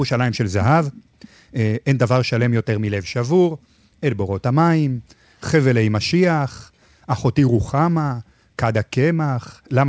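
No technical faults can be heard anywhere in this speech. It has passed through a WebRTC call path, and the band stops at 8 kHz, which fits a wideband codec such as G.722.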